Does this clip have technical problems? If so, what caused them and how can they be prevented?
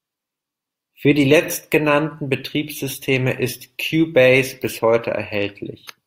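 No, there are no technical problems in this speech clip. With nothing at fault, there is no cause to trace and nothing to prevent.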